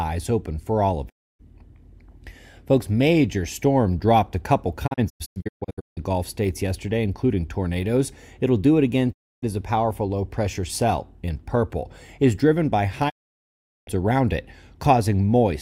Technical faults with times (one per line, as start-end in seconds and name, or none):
1.08-1.41 digital broadcast dropout
4.86-5.99 digital broadcast dropout
9.11-9.44 digital broadcast dropout
13.08-13.89 digital broadcast dropout